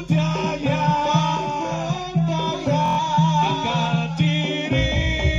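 At 2.86 s the sound breaks into a brief machine-gun buzz lasting until 2.99 s, a Bluetooth stutter. Packets failed to arrive in time, so the receiver kept replaying its last short slice. About 116 ms of material went missing, which fits roughly five lost packets. Playback then resumes further along. On a waveform the gap shows as one short segment copied several times in a row, and a spectrogram shows the same thin vertical stripe repeated like a comb.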